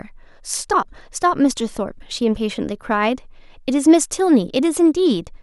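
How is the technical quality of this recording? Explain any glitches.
The recording carries a repeating glitch from start to finish: clock slip clicks, running from 0.12 s to 5.37 s. Roughly every third of a second, around twenty times in all, a faint tick sits on the speech. The regular spacing points to two unsynchronised clocks drifting apart by roughly 70 ppm, likely forcing a single sample to be dropped or repeated each time the error adds up to one sample.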